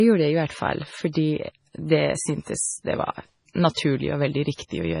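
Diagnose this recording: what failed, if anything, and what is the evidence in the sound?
The codec stage failed. The speech was likely squeezed through a low-bitrate MP3 encode, and the damage runs the whole clip. Nothing survives above 10.5 kHz, where the encoder cut the treble to save bits. Weak frequency lines drop in and out from frame to frame, giving the speech a watery, swirly texture, with metallic chirps on s sounds. The depth of the damage fits a very low rate, around 24 kbps.

Pre-echo, also from the codec, smears four attacks: 1.13 to 1.15 s, 3.53 s, 3.73 to 3.77 s and 4.54 to 4.59 s. In each case a sharp onset fell late in a transform block. The quantisation noise, sized for the loud attack, spread across the whole block and filled the quiet gap before it. That leaves a short hiss leading each attack by 18 to 46 ms, and the onsets sound soft rather than crisp.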